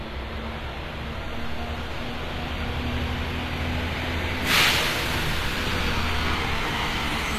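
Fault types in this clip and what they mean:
HE-AAC compression: treble above the coded band is likely rebuilt from copied lower bands, sounding gritty and metallic, with nothing above about 14.9 kHz, fitting roughly 24 kbps.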